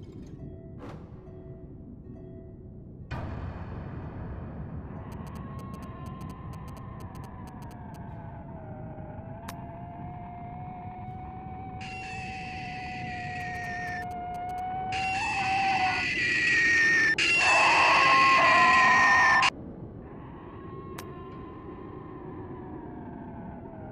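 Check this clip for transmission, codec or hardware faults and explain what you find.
Two bursts of GSM signalling interference sit on the clip, from 5.12 to 7.96 s and from 13.40 to 14.60 s. A nearby 2G phone exchanging control bursts with its network drives short groups of RF pulses that the audio circuitry rectifies. You hear a galloping dit-dit-dit of brief 216.7 Hz buzzing, roughly 20 dB under the wanted signal. A spectrogram shows evenly stacked harmonic lines at 216.7 Hz multiples, and the waveform shows clustered spiky pulse trains.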